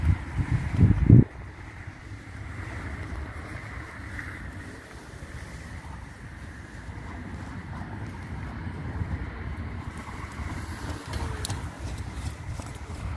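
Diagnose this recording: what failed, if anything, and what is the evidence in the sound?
Nothing here points to a failure at any stage of the chain, so there's nothing to diagnose.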